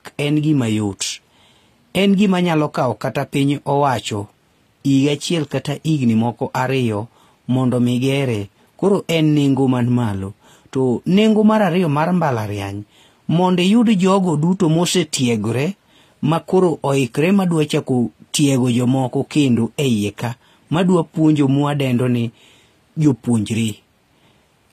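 Throughout the speech there's a smeary, doubly processed texture and nothing above 14.9 kHz: likely transcoding between lossy codecs, fitting low-rate HE-AAC re-encoded as AAC-LC.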